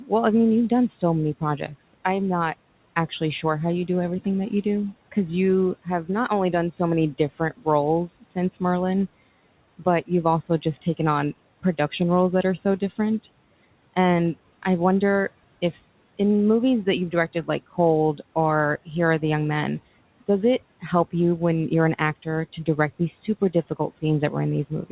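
Speech cut by the noise suppressor recurs across the clip, in stretches from 0.07 to 1.73 s, 3.09 to 8.62 s, 9.79 to 12.99 s, 16.85 to 19.22 s and 20.21 s to the end. The suppressor misreads soft speech as noise and pulls it down by about 13 to 15 dB, so consonants and word endings sound swallowed for brief moments adding up to a fraction of a second in each of the first four stretches.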